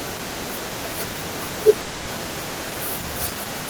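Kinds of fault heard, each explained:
Call audio freeze: At 1.81 s the speech stalls. The last sound is held as a fading buzz for 260 ms, until 2.10 s. Speech then resumes where it stopped, with nothing lost, 260 ms late. Delayed packets likely emptied the jitter buffer.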